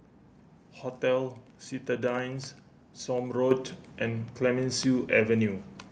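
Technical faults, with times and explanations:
0.43–5.92 s, word clock ticks: the receiving device's clock, roughly 100 ppm off the sender's, slips about every half second, dropping or repeating one sample and leaving a sharp periodic tick.
3.51 s, microphone volume stepped up: the call software raised the input volume in one jump of about 6 dB, so speech and background suddenly grow louder together.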